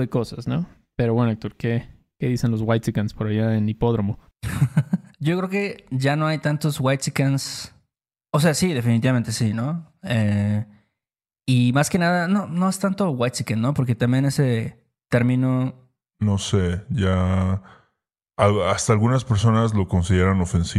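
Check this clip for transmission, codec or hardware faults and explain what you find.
One fault, and it sits right at the tail end. From 16.11 s to the end of the clip at 20.8 s there's a section at the wrong speed: the speech drops to about 0.83 times its proper rate, so the voice turns slow and deep, roughly three semitones lower. Speed and pitch shift together at the moment it starts, which likely means that stretch was played back or resampled against the wrong clock.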